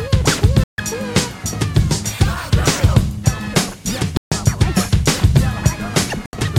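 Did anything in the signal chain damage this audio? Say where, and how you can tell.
Yes, at the wireless playback stage. The music cuts to silence at 0.64–0.78 s and 4.17–4.32 s (145 ms each) and 6.26–6.33 s (73 ms), then resumes as if it had played on. This is likely a Bluetooth dropout, with late packets discarded.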